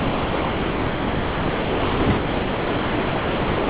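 From 0.00 to 3.69 s the speech is absent and only steady, featureless noise remains, band-limited to nothing above 4 kHz. This is sound dropped by the voice detector: the sender likely classed the speech as background, and comfort noise filled the gap.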